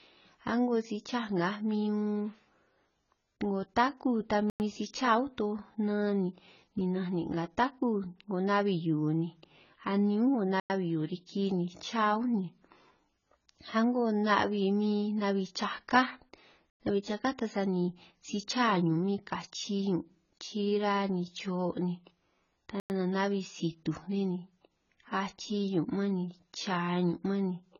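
From the start, the speech is dull and band-limited. Nothing is heard above 7 kHz. Sibilants turn fizzy and smeared, and sustained sounds warble. The damage is heavy. The likely cause is AAC compression, AAC-LC at a very low rate. The sound fits roughly 16 kbps. At that rate the encoder drops the top of the spectrum. It also starves the remaining bands, which leaves holes and noisy fill.

The first gap between chunks comes at 4.50 to 4.60 s. It is a hole of silence, 100 ms long. More follow at 10.60 to 10.70 s, 16.70 to 16.80 s, and 22.80 to 22.90 s. The spacing is regular. The audio arrives in 6-second chunks, and silence sits at each join. No speech is lost. It is only pushed later and broken up at each seam.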